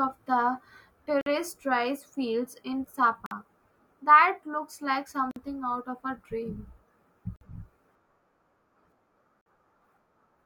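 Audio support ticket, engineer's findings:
Gap between chunks: 50 ms hard-edged silences at 1.21, 3.26, 5.31, 7.36 and 9.41 s, with 2 s blocks of speech between them. Chunk join or late-start playback. Unlike a dropout, no speech is lost; it resumes exactly where it paused.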